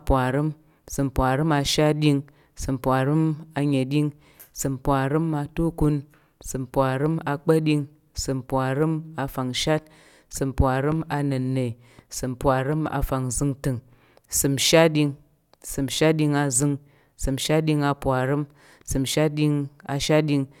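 Nothing in the speech recording points to a technical fault at any point.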